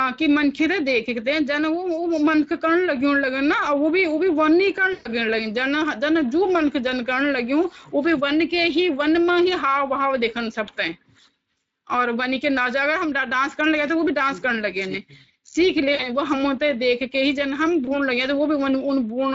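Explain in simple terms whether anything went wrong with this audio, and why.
Speex codec damage runs through the whole recording. This older internet-call speech codec squeezes the voice into very little data, and here that squeezing is plainly audible: the speech sounds rough, hoarse and noisy, because too little detail survives to rebuild it cleanly.

VoIP packet loss concealed by the speech codec occurs at 4.93–5.08 s, 10.65–10.70 s, 15.95–16.08 s and 17.85–17.99 s. Pieces of the call went missing, and the decoder guessed to fill them by stretching the last sound into a fading buzz or noise. The longest gap, at 4.93 s, is about a tenth of a second.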